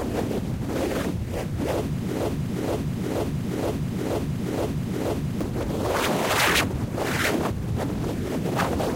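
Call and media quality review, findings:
Broken-record loop, 2.20 to 5.41 s. A 0.47 s chunk of the sound repeats exactly, back to back, seven times, then normal playback picks up again. The likely cause is a stall in the player, encoder or stream that kept pushing out the last buffered fragment. Whatever should have played across those three seconds is gone.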